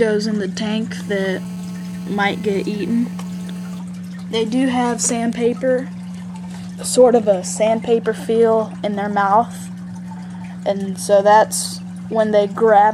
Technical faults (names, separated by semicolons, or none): GSM phone buzz